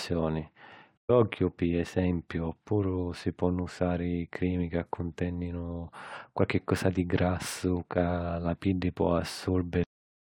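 From 0.97 to 1.10 s there is AAC frame loss with muting: the decoder zeroed the missing frames, leaving a soft-edged gap of about 128 ms with gradual fades. At 9.84 s there is a cut-off end, where the final buffers were never played, so the speech stops mid-sound and drops straight to digital silence without decay.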